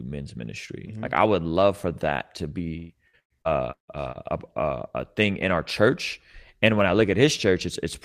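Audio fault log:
2.77–4.51 s, repeated packet loss (robotic sound): seven gaps open in quick succession, the longest 170 ms, and roughly 30% of the stretch is patched by stretching out the preceding sound, about 523 ms filled in all, with about 40 ms roughly rebuilt. The repeated copies give a choppy quality with pieces missing. On a waveform the envelope looks chopped and repetitive. On a spectrogram, harmonics freeze into flat, smeared bands between abrupt breaks.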